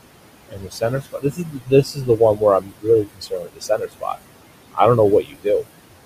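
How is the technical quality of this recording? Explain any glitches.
The recording has two problems, both from the noise suppressor.

Noise suppressor artifacts run throughout. The suppressor turns down each frequency band it judges to be steady noise, frame by frame, by about 21 dB. The room noise, about 13 dB below the speech, sinks between words and swells back under them.

Speech cut by the noise suppressor happens four times. The suppressor mistakes parts of the speech for noise: 0.49 to 2.42 s (roughly a second affected, down about 19 dB), 2.61 to 2.87 s and 3.04 to 4.19 s (both about 22 dB), and 5.22 to 5.46 s, just after "don't know" (about 18 dB). Those stretches sound swallowed or faint.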